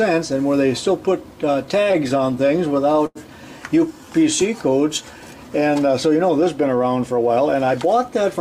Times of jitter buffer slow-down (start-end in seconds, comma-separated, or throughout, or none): 3.88-5.28